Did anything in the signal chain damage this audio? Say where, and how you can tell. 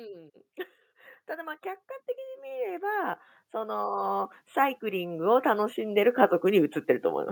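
Yes: automatic gain rising in call processing. From 2.15 to 6.06 s, speech and background swell together by about 16 dB; the waveform envelope widens gradually and the spectrogram brightens evenly across all frequencies.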